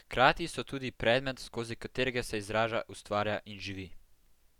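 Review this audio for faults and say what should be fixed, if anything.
Nothing stood out on listening to the speech, so there is nothing here that needs fixing.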